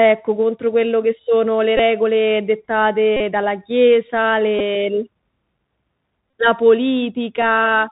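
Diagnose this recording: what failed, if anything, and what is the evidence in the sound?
Bluetooth CVSD headset codec, present for the whole recording. This is a failure at the codec stage. The speech is cut off at 4 kHz, sibilants come out scratchy, and a granular hiss sits under the voice. This fits a 64 kbit/s CVSD link. That codec sends one bit per sample stating only whether the waveform rises or falls. Its adaptive step cannot keep up with loud high-frequency energy, so those passages distort and the quantisation leaves the grainy floor.

Bluetooth headset packet repeated, at 1.77 to 1.79 s right after "quello che sono le", at 3.17 to 3.20 s just before "dalla chiesa", at 4.59 s right after "dalla chiesa", and at 6.30 to 6.33 s. This failure sits on the wireless link. At each point the radio lost packets and the chip replayed the last good one. The gaps, up to 37.5 ms, repeat every 3.75 ms and form a brief buzz near 267 Hz. 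The shortest, at 11.2 ms, still spans three lost packets.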